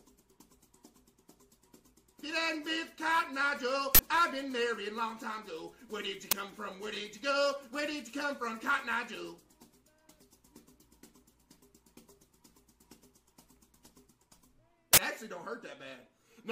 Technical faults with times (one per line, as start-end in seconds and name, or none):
3.95-3.99 uninitialised buffer
6.31 uninitialised buffer
14.93-14.98 uninitialised buffer